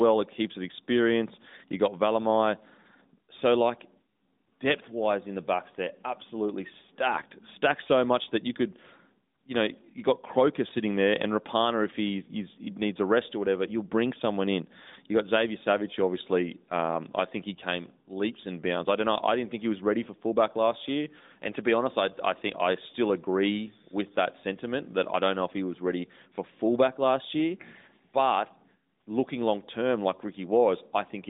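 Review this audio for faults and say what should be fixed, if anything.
Nothing needs fixing: the speech has no faults, and its narrowband mobile-codec character, with nothing above about 3.8 kHz, is the expected behaviour of that channel rather than a defect.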